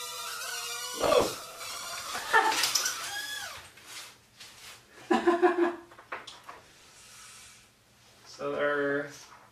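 Processor overload crackle tears through the sound from 1.01 to 2.35 s and again from 6.51 to 6.99 s. Dense runs of tiny skipped buffers, spaced in a way that fits a buffer of about 3 ms, form a gritty crackle that stops abruptly, unlike clipping, which tracks loudness.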